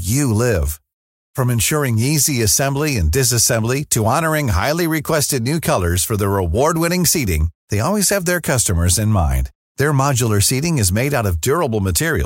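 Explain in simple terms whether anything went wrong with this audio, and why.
Nothing stood out as wrong when listening to this speech recording.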